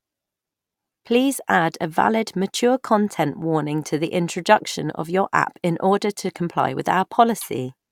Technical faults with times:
none

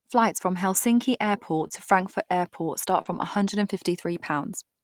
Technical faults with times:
1.59-1.74 lost packet rebuilt from error correction
1.67-1.72 short concealed packet loss
3.02-3.07 short concealed packet loss
3.05-3.23 lost packet rebuilt from error correction

